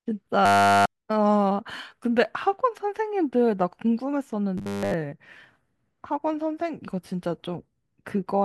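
Speech arrives too seldom at two points, most likely causing robotic sound from repeated short buffers: a stretch about 10 ms long loops in place of the skipped audio. From 0.46 to 0.96 s it replaces essentially everything, and from 4.58 to 4.94 s most of it, turning the speech into a rigid, metallic 100 Hz buzz.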